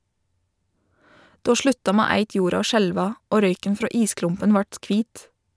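Speech recording, with no technical faults to be heard.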